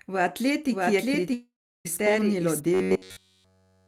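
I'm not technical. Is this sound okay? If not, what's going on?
No, there are three faults. From 0.71 to 2.6 s you hear a doubled audio track. A second copy, about as loud as the original, runs roughly 0.7 seconds behind and starts and stops abruptly. Most likely the same sound was captured twice through paths of different speed.

From 1.33 to 1.87 s there is a long network dropout, most likely from audio failing to arrive. The last sound is stretched into a fading buzz, then goes quiet, and about half a second of speech never comes back.

From 2.74 to 3.87 s the speech has robotic sound from repeated short buffers. Throughout that stretch it becomes a rigid, metallic drone at 93.8 Hz. That pitch fits a tiny chunk of about 10.7 ms being replayed over and over, likely because new audio arrived too rarely.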